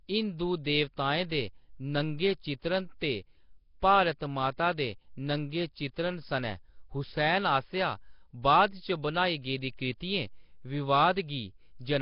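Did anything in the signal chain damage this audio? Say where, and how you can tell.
Yes, at the codec stage: the speech carries heavy Nellymoser compression damage for the whole clip, likely from Flash's Nellymoser Asao codec at a rate around 22 kbps. There is nothing above 5.3 kHz, and a rough, hissy halo with a smeared, underwater quality surrounds the voice. Plain band-limiting would sound dull but clean. Here the codec gives weak bands no bits and fills them with noise, so the hiss is stuck to the speech itself.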